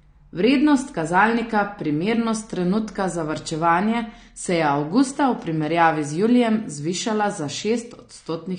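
AAC compression damage runs throughout the speech, with nothing above 9.7 kHz. The likely cause is a low-bitrate AAC-LC encode, which fits about 32 kbps: the coder drops the top band and thins the spectrum, leaving a dull, smeared sound with fizzy sibilants.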